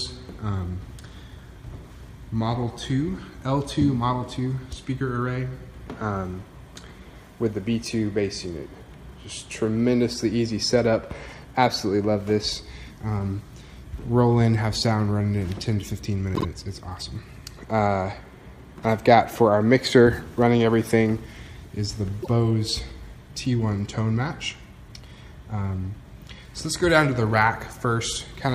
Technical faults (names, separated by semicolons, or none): repeated frames